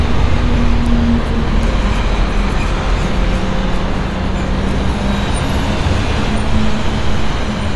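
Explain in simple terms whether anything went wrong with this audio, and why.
AAC compression, from start to finish: nothing sounds above 11.5 kHz, so the audio is dull and smeared, with a fizzy, warbling texture. It was likely squeezed too hard by an AAC encoder, which threw away high frequencies and fine detail to save space.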